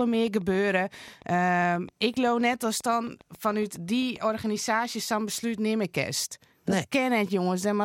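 From 0.01 s to 4.3 s the speech carries a train of clicks: around thirty near-identical pulses at a steady 7.46 per second, peaking roughly as loud as the speech itself and ticking through pauses as well as over sound. The regular spacing and matching shape set this apart from random crackle or isolated dropout pops. A repeating pulse like this is likely interference from nearby equipment or a faulty connection or power supply.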